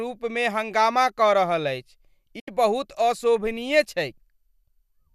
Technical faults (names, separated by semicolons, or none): digital broadcast dropout